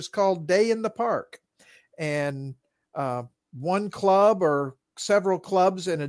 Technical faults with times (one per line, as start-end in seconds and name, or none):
none